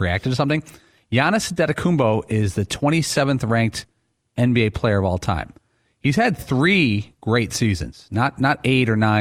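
No dropouts, clipping, glitches or other transport or processing faults are audible anywhere in the speech.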